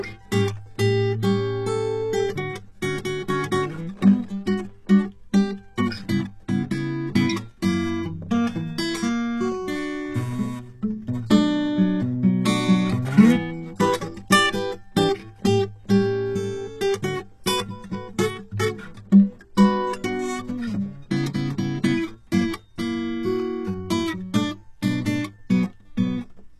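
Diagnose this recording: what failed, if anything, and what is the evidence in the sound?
The codec stage failed, with damage that is plainly audible across the whole piece of music. The top of the spectrum is synthetic, with gritty, metallic cymbals, and nothing remains above 12.3 kHz. That pattern is likely HE-AAC compression at a very low rate, pointing to around 16 kbps. Only the lower band is truly coded, and the treble is rebuilt by copying lower bands upward, so its harmonics no longer align with the original.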